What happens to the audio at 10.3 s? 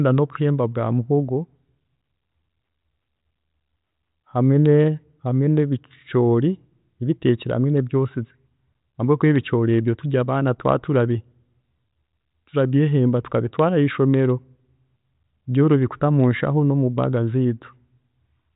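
Nothing goes wrong at 10.3 s: the speech continues intact there, heard through the narrowband G.726 ADPCM path at 40 kbit/s, which passes nothing above 3.8 kHz but adds no fault at that point.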